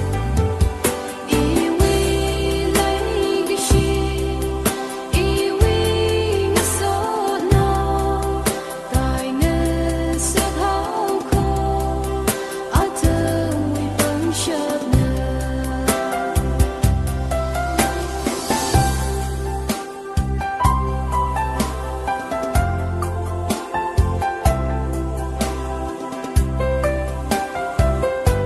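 A stretch of audio was dropped in transit or discarded by an overflowing jitter buffer, causing a skip ahead at 12.80 s: roughly a fifth of a second vanishes and the two sides join almost directly. The call codec limits the high end to about 12 kHz.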